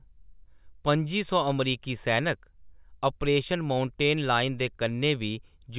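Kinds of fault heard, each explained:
No kinds of fault are heard in this speech clip.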